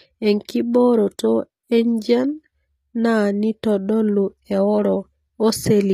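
From start to finish the speech has plainly audible codec damage: the s sounds come out gritty and lispy, and nothing reaches past 14.9 kHz. That's likely HE-AAC compression, rebuilding the treble from copied lower bands, which fits a low bitrate around 24 kbps.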